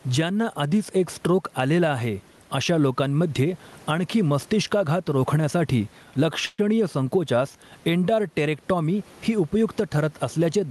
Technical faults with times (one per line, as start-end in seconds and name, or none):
0.00-10.71 gain pumping
6.45-6.60 call audio freeze